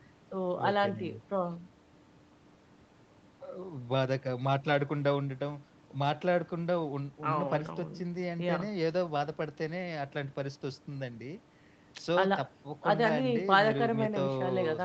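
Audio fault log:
Nothing to log here: it's speech carried over a call line, with nothing above about 8 kHz, the way an ordinary call path sounds.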